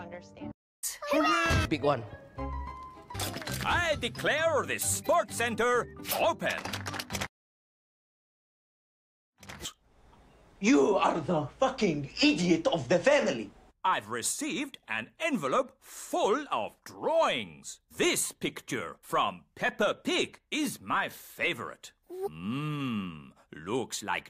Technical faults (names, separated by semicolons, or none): none